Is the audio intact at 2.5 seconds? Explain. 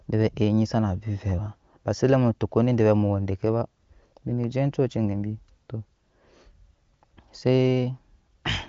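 Yes, the audio is intact at 2.50 s, with no fault in the sound at that moment.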